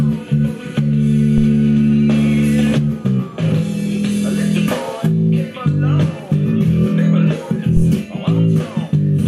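At 1.38 s and again at 7.77 s a deep phantom power thump cuts in, peaking near about −7 dBFS and then about −5 dBFS. A supply switching on a live input sends a voltage step through the coupling capacitors, giving a low thud that dies away in roughly 24 ms and 19 ms, each event over within about 0.1 s. Unlike a click or digital pop, the energy sits low in frequency with a clean, smooth decay.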